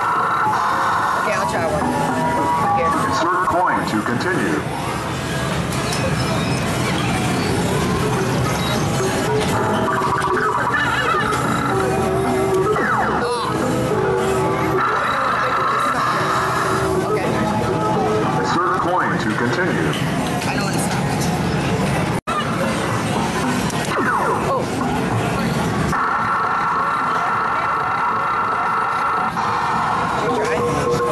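Compressed frames skipped at 17.61 s and 25.97 s: the audio jumps ahead about a tenth of a second, then a few hundredths, each join a smeared blip consistent with 26.1 ms frames.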